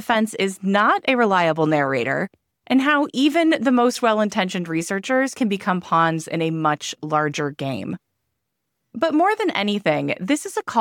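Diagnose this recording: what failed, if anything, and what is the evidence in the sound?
Nothing failed; no stage shows any audible fault.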